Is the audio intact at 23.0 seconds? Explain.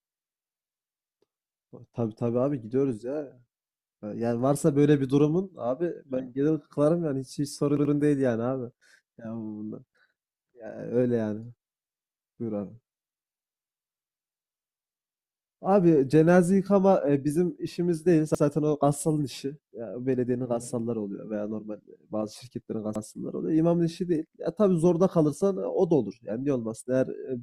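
No. From 22.96 to 23.04 s a short stretch of speech stutters, sounding twice with a hard join. This is a repeated buffer: new audio arrived late, so the device replayed its last 85 ms block, which fits a 4096-sample buffer.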